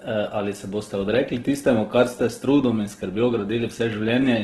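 Throughout the speech the sound is rough and grainy, with nothing above 12.3 kHz, which points to likely Opus compression in its music mode near 12 kbps. Starved bands are filled with noise rather than left empty, so it swirls less than MP3.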